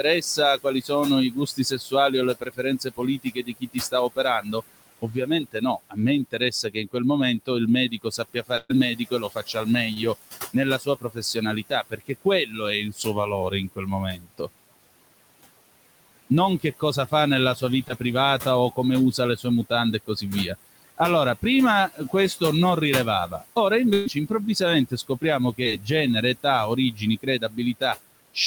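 A noise suppressor runs across the whole recording, pulling what it judges to be steady background down by about 20 dB frame by frame. The room noise, about 15 dB under the speech, dips in pauses and swells back beneath each phrase.

From 0.03 to 9.67 s the same suppressor cuts speech, mistaking soft consonants and word endings for noise and dropping them by up to about 21 dB. Roughly three seconds in all sound swallowed or faint.

At 8.57 to 8.71 s a burst of packet loss removes 120 ms of audio. The receiver extends the last sound for about 119 ms, fading it into a held buzz or hiss, with 10 ms of silence before the audio resumes further on.

At 9.93 to 9.98 s a short concealed packet loss of 20 ms is patched with about 28 ms of continued sound, heard as a brief smear.

Speech cut by the noise suppressor returns from 10.54 to 14.49 s, with drops up to about 22 dB over roughly a second and a half.

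It returns again from 16.30 to 22.41 s, with drops up to about 20 dB over under a second. Within that stretch, at 17.88 to 17.92 s, another 20 ms hole is filled for about 14 ms, giving a quick wobble.

From 23.27 s to the end the suppressor again clips quieter speech by up to about 19 dB. Inside this stretch, at 23.94 to 24.08 s, a second burst of packet loss drops 120 ms, concealed for about 122 ms with no silent gap, so a fading held sound bridges straight into later audio. At 25.64 to 25.67 s a final short concealed packet loss fills a 20 ms gap for about 16 ms, heard as a brief smear.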